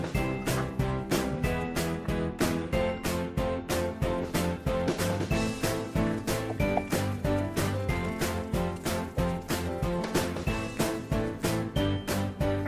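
Nothing goes wrong anywhere in this clip, so there's no fault to point to at any moment.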